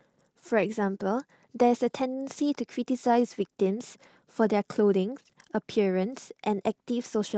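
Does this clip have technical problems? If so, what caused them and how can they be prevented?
Yes. The speech carries clock drift between sender and receiver throughout. The sender's audio clock runs slow, roughly one and a half percent behind the receiver's, so the jitter buffer keeps draining and the receiver must keep filling gaps. This differs from network jitter or packet loss: the hiccups don't come in bursts tied to congestion. They persist steadily, always in the same direction, for as long as the call runs. Prevention: resample the stream against the receiver's clock with adaptive drift compensation.

Repeated timing corrections run from 0.54 s to 7.35 s as small, unevenly spaced edits. The pace sits near 98% of normal, and the repeated or stretched pieces add around a tenth of a second in total. Each edit lengthens the audio because the receiver is stretching to cover a starved buffer. 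That distinguishes these corrections from dropouts, which leave silent holes, and from time-scale artefacts caused by loss concealment, which cluster around lost packets. Prevention: use a smoothly adaptive resampler so the receiver doesn't need discrete cut-and-repeat edits.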